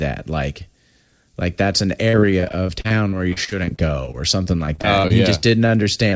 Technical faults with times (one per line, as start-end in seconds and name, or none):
2.10-5.12 repeated packet loss (robotic sound)
5.67-5.70 short stall from a late packet
6.10-6.14 short concealed packet loss